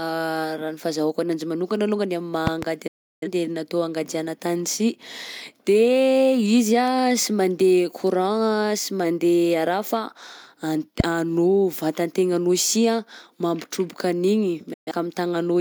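At 2.47 to 2.65 s a pair of sharp pops jumps out well above the speech, which carries on beneath them. These are loud pops, each a brief pulse added on top of the signal and shaped into a click by the circuitry downstream. The same thing happens once more at 11.00 to 11.02 s as a single pop. A sudden voltage step, most likely from a plug, switch, static discharge or driver glitch, would account for both events.

Just after the first pair, at 2.87 to 3.28 s, the speech fades to silence in about 8 ms and stays gone for roughly 341 ms before returning. A shorter gap of 128 ms follows at 14.73 to 14.92 s, with the same quick fade. Both are digital broadcast dropouts. The receiver muted when it lost the signal or rejected corrupted frames, and the lengths of the gaps suggest several frames lost each time. Whatever was transmitted during those holes is gone.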